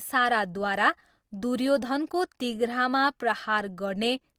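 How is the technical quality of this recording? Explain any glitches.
The technical quality is compromised by codec damage that runs through the whole speech clip. Throughout, Opus compression leaves the sound rough and grainy, likely from Opus's music mode at a low rate, around 24 kbps. Starved bands are filled with folded or noise-like content, though bandwidth still extends to about 20.2 kHz.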